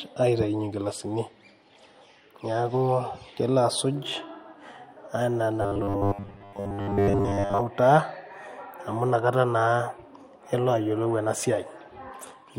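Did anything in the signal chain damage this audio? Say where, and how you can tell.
Yes. From 5.62 to 7.62 s the speech turns into a rigid, metallic 100 Hz buzz, a robotic sound from repeated short buffers, likely a starved driver buffer looping about 10 ms for most of that stretch.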